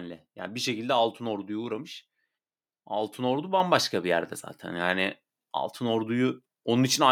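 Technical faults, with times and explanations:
3.6 s, microphone volume stepped up: speech and background jump together by about 5 dB just before "bir yerde zaten", as the input gain is raised in one step.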